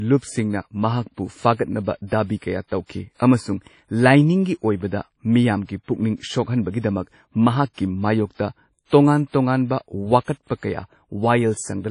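WMA compression throughout: the speech sounds ringing and washy, with hiss breathing alongside it and nothing above 10.1 kHz, likely from low-bitrate transform coding near 32 kbps.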